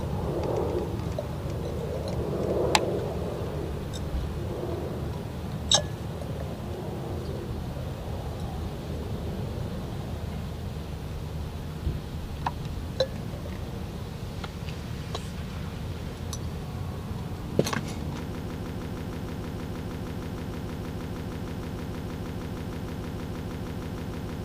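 At 18.35 s the audio locks into a broken-record loop that runs to the end of the clip. A fragment about 156 ms long repeats exactly, back to back, 39 times, producing a rapid, mechanical stutter at roughly six repeats per second. The likely cause is a stalled player, encoder or stream that kept resending the last fragment it held, so the material that should have played after 18.35 s is lost.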